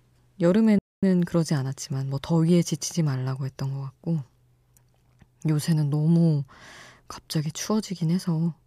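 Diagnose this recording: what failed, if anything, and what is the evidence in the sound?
The speech drops to silence from 0.78 to 1.03 s, a 240 ms gap, then continues: a playback stall, likely the player starved of data.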